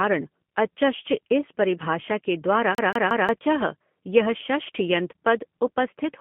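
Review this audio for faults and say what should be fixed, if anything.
The whole clip runs through a G.729 codec. The speech sits between 150 Hz and 3.4 kHz with a rough, synthetic edge, which fits an 8 kbit/s stream.

From 2.75 to 3.29 s there's a CD stuck on one turn: the same 0.18 s chunk repeats three times, with a short mute at each jump back.

To prevent both, record or transfer with a wideband codec instead of G.729, and rip from a clean disc with error-correcting extraction.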